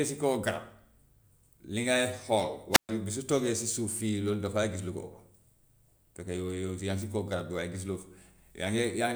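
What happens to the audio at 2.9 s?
At 2.9 s the speech is just coming back from a wireless microphone squelch dropout. The fault runs from about 2.71 to 2.89 s. The radio link from the transmitter weakens until the receiver's squelch closes and mutes its output. A brief surge of hiss marks the fading signal. Then comes a hole of near silence lasting about 127 ms. The voice returns right at the end of the span.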